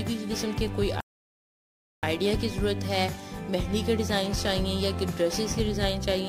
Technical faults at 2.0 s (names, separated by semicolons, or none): playback stall